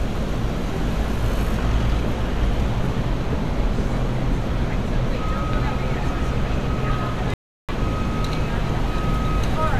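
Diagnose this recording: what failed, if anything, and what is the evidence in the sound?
Playback failed with a rebuffering stall: the sound drops to silence at 7.34 s and picks up exactly where it left off at 7.69 s. The player starved and waited, adding 350 ms without losing anything.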